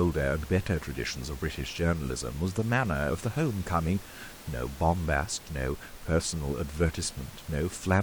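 Right from the start, up to about 1.5 s, there's a mains hum sitting under the speech: a steady low drone at 60 Hz with a bit of low harmonic buzz on top, roughly 20 dB below the speech. That's the power line leaking into the signal, most plausibly through a ground loop or a transformer near the cabling. The room's own background noise, about 19 dB down, stays underneath throughout.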